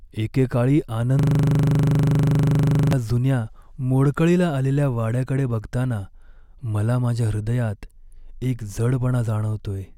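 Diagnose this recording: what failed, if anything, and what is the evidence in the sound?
The driver or buffer stage failed: a system hang loop from 1.19 to 2.93 s. The speech freezes into a steady buzz at 25 Hz, one 40 ms slice replaying exactly, dozens of times. The host stalled while the hardware kept cycling a ring buffer of that length.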